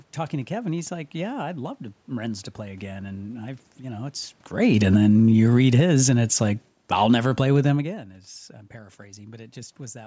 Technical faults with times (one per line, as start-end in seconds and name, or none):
4.54-6.02 automatic gain falling
6.77-7.39 automatic gain falling